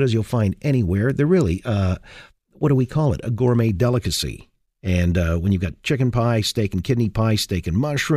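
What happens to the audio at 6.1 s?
Nothing goes wrong at 6.1 s; the speech carries on intact through that moment.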